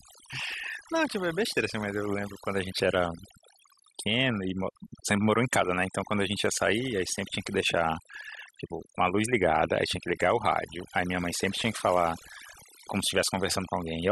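A speech recording with overdone noise removal running from start to finish. The noise reduction was set far too aggressively, so any frequency band sitting close to its noise estimate gets pushed down hard or cut entirely. The background drops and breaks up into twinkling specks, and the quieter components of the voice are stripped out with the noise.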